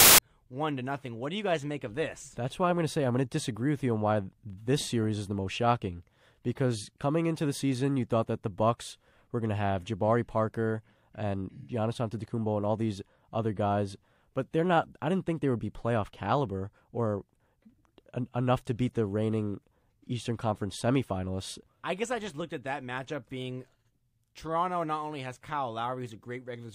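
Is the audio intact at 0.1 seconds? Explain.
No. From 0.0 to 0.18 s, file tags are played as audio: an embedded cover picture's compressed bytes decoded as samples, giving hard-edged, very loud white noise before "one to nothing". Text tags would rasp off-centre instead.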